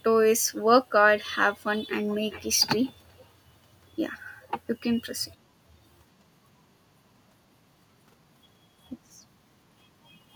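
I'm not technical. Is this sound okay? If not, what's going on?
No. Faint echo leak from 2.07 to 2.61 s and, fainter still, from 3.08 to 3.26 s: the speech repeats 0.38 s later, likely a loudspeaker's sound getting back into the microphone.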